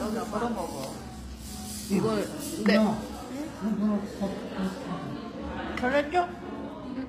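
From start to finish the top end sounds bright but synthetic, with gritty, metallic sizzle and nothing above about 15.5 kHz. That's likely HE-AAC compression rebuilding the treble from copied lower bands, so the harmonics don't line up, which fits a low bitrate around 24 kbps.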